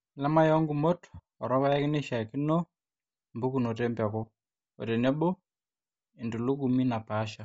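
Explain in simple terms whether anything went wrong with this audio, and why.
Throughout the speech, the upper sounds turn breathy and grainy rather than simply muffled, most likely from Bluetooth LC3 compression filling in its missing treble with noise.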